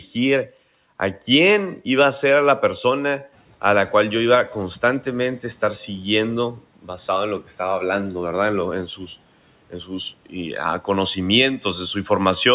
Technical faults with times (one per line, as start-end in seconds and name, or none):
9.70-9.91 speech cut by the noise suppressor